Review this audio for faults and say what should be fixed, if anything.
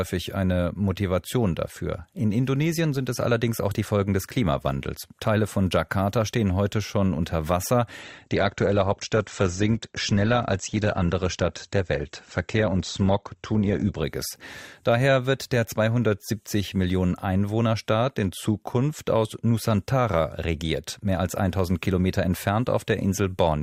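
From 8.03 to 14.03 s an adaptive stream at a lower bitrate takes over. The speech turns dull and swirly with no gap, which suggests a drop from 64 to 16 kbit/s Opus. A spectrogram shows nothing above 8.2 kHz there. Deeper buffering would prevent it.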